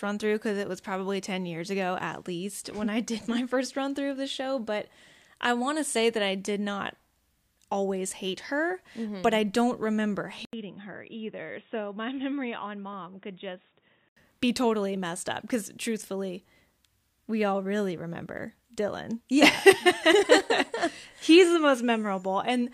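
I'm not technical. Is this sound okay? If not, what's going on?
No. At 10.45 s, just after "but I don't remember", the recording likely switched to a poorer input device: after a brief gap it sounds quieter, duller and muffled until 14.17 s, before "be totally messed up".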